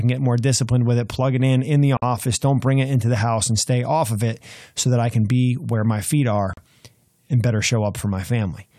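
At 1.97 s a gap of about 52 ms cuts into the speech. At 6.53 s a second one of about 39 ms follows. Both are gaps at a join of encoded pieces. Each piece kept its encoder start delay and end padding. The edges are smeared by the codec, and the speech resumes where it stopped.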